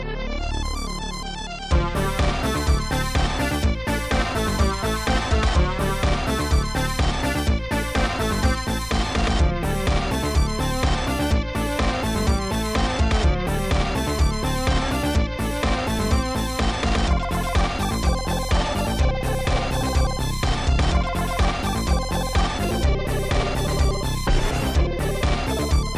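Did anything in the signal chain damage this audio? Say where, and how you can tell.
No, nothing in the signal chain damaged this audio.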